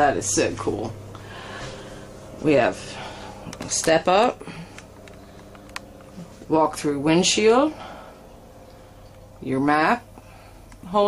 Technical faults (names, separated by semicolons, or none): none